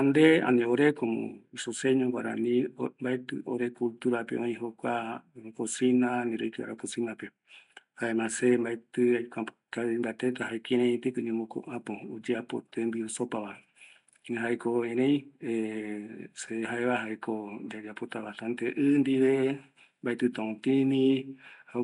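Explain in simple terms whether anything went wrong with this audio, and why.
Something did go wrong, and it runs through the entire recording. The speech has a rough, hissy fuzz hanging around it and a smeared, underwater feel, and the damage is easy to hear. That points to Nellymoser compression, likely the old Flash microphone codec, which packs sound into small chunks with very few bits each. Weak frequency bands get filled in with noise instead of real detail, and everything above about 10.6 kHz is simply gone, so the top end sounds dull.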